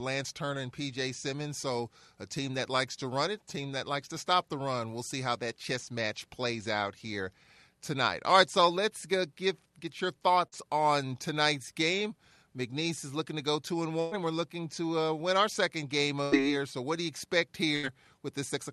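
At 10.47 s, between "go get get your" and "on tonight's game", about 40 ms of the speech arrived too late for the decoder. This short concealed packet loss was patched by extending the preceding sound for 44 ms, leaving a brief smear before the audio blends back in.

Bursts of packet loss follow at 14.00 to 14.14 s (117 ms, between "to go two and" and "and we're looking to"), 16.23 to 16.35 s (82 ms) and 17.76 to 17.86 s (75 ms, after "what do you expect"). Each time, consecutive packets went missing, the receiver stretched and faded the last sound into a held buzz or dying hiss, and the speech jumps ahead with that stretch gone.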